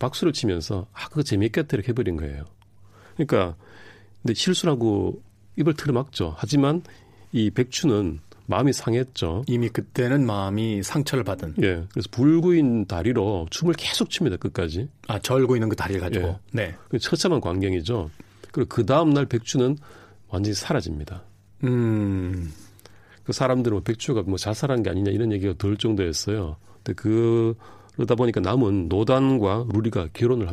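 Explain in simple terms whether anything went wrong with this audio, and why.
Nothing went wrong here; the speech rolls along with no hiccups or interruptions you'd notice at any point.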